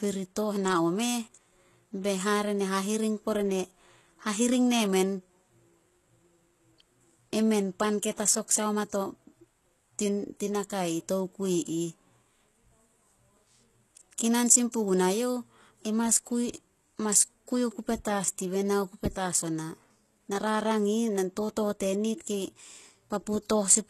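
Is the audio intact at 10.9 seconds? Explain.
No. At 10.9 seconds, as across the whole recording, the speech carries plainly audible damage, likely from HE-AAC compression. The treble above the coded band is rebuilt from copied lower bands, so s sounds turn gritty and metallic rather than simply dull, and the top stops at about 12.3 kHz. That fits a very low bitrate, around 16 kbps.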